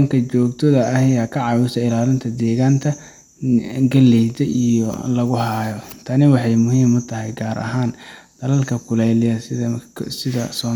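A speech recording with nothing technically wrong that can be heard.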